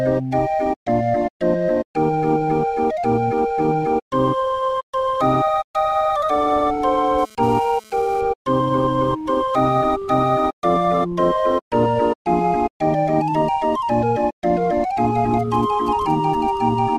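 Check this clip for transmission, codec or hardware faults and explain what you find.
Two episodes of mobile-phone interference are present, both from a nearby 2G handset.

From 7.19 to 8.21 s there is GSM phone buzz: the handset's radio bursts, repeating at 217 Hz, are rectified by the audio circuitry. The result is a hard, raspy buzz rich in harmonics, about 27 dB below the signal, which starts and stops in the way a data transfer does.

From 15.39 to 16.58 s GSM signalling bursts appear: short groups of transmissions, again rectified into the audio path. They produce a galloping dit-dit-dit of brief 217 Hz buzzes, roughly 25 dB below the signal.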